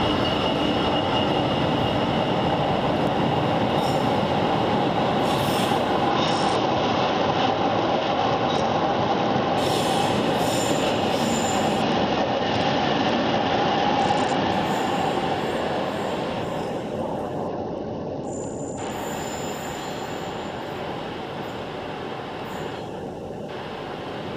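Three Bluetooth SBC bit pool drops occur, at 6.10 to 9.58 s, 11.82 to 14.52 s and 17.48 to 18.91 s. Each time the treble dulls and gritty noise rises. The sound fits a congested link forcing the encoder's bit pool from 28 down to 9, about 78 kbps.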